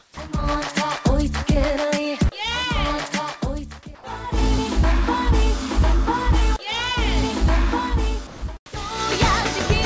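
Comfort noise in place of the background appears three times: 0.00 to 0.17 s, about 5 dB quieter; 3.95 to 4.04 s, about 3 dB louder; and 8.27 to 8.42 s, about 3 dB quieter. Each gap trades the real background for a steady, featureless hiss. The likely cause is discontinuous transmission: the sender goes silent between sounds, and the receiver synthesises noise roughly matching the background, in the manner of RFC 3389. The call path's G.722 coding leaves nothing above 8 kHz.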